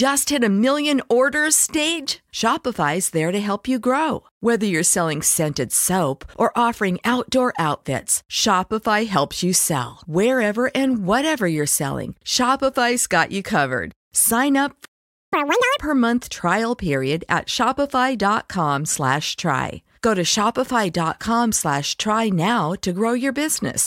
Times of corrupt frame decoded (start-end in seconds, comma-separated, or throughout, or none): none